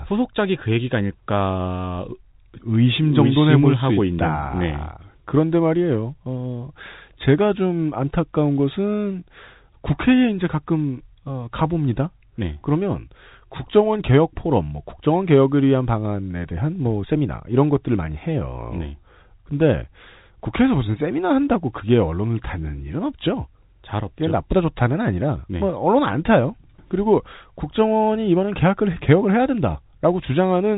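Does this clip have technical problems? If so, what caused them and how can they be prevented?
No, nothing in this speech clip stood out as a technical problem on listening.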